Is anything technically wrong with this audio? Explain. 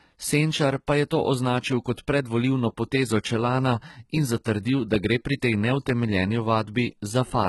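Yes. Throughout the speech there is heavy codec damage, most likely from HE-AAC compression at a very low bitrate, the sound pointing to something around 16 kbps. Nothing is present above about 11.8 kHz. Only the lower spectrum is properly coded. The treble is rebuilt by copying lower bands upward under a coarse envelope, so its harmonics fail to line up with those below. Sibilants come out gritty, metallic and lispy.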